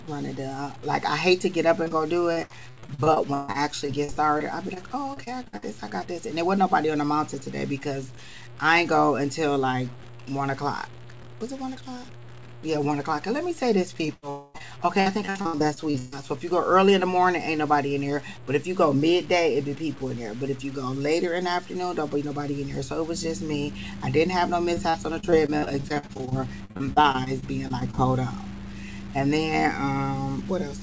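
Throughout, a grainy distortion tracks the level of the sound, sitting roughly 25 dB below it, which is likely low bit depth without dither, consistent with truncation to about 7 bits. At 1.84 to 1.88 s and 1.88 to 1.92 s, two back-to-back short concealed packet losses each replace about 20 ms of missing audio with continued sound, heard as a brief smear. Repeated packet loss (robotic sound) follows from 2.32 to 4.78 s and 5.14 to 5.64 s, with holes up to 141 ms patched over and over, giving choppy audio with pieces missing. The same robotic pattern returns from 14.06 to 16.14 s. Within it, from 14.30 to 14.56 s, a 240 ms stretch is filled by a fading continuation of the last sound, a long network dropout being the likely cause. A final burst of repeated packet loss runs from 24.74 to 27.99 s, with 29 short holes, none longer than 50 ms, making the sound choppy and robotic. Across the whole clip, nothing is heard above 8 kHz, as expected from the G.722 call path.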